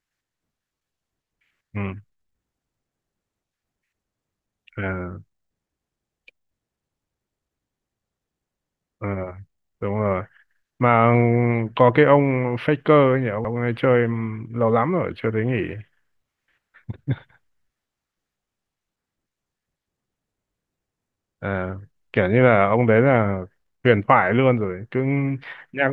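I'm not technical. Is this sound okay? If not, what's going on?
No. At about 13.45 s there are repeated frames: one chunk of the compressed audio, about 0.09 s long, which fits a single frame, was played twice. You hear a brief stutter in the speech, and it runs about 0.09 s longer.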